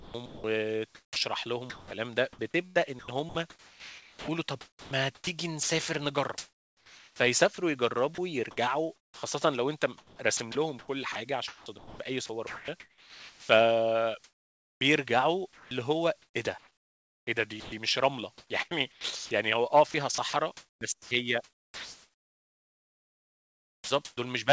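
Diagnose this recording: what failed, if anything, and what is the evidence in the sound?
What failed is call processing on the sending end. The speech is chopped by the voice detector from 0.0 to about 24.17 s, so pretty much the whole take. Quiet syllables and word edges drop out, with about 10.3 s of it replaced. The likely cause is the sender's voice detector toggling transmission and filling gaps with comfort noise. The band also stops at 8 kHz, which fits a wideband call codec like G.722.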